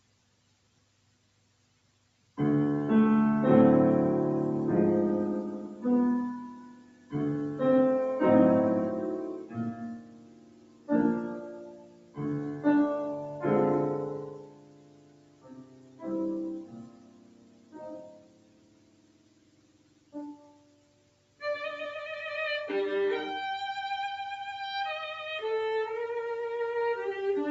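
The audio has been run through a noise suppressor applied to music or sounds, a processor built for speech that mistakes sustained tones, ambience and decaying tails for noise. Its gain swings by around 20 dB across the clip, so attacks come through while held material sinks and the sound pumps and thins. The sound is cut by the noise suppressor most heavily from 0 to 2.37 s, 6.55 to 7.13 s, 9.38 to 10.9 s, 11.35 to 12.19 s, 14.2 to 16.07 s and 16.59 to 21.41 s, where the level falls by about 13 to 14 dB. In those stretches steady and fading sounds sink in level while sudden sounds mostly come through, under a top end that stops near 8 kHz as the call path allows.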